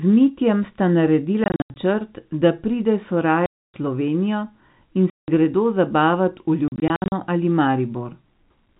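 You get four bursts of packet loss filled with silence in this speech. From 1.44 to 1.76 s there's a scattering of short dropouts, the longest about 80 ms. Right after "da pride", 3.46 to 3.74 s goes dead, and 5.1 to 5.28 s cuts out just before "gredo zabavat v". After that phrase, 6.68 to 7.12 s is chopped again in bits up to 60 ms. Each hole starts and stops abruptly, and the lengths fit 20 ms packets simply not arriving. The narrow telephone band of the G.711 line carries on around the gaps.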